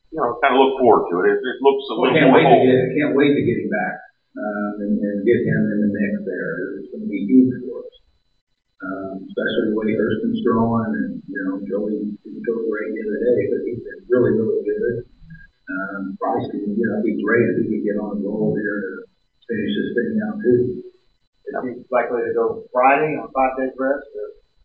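No technical faults are audible anywhere in the recording.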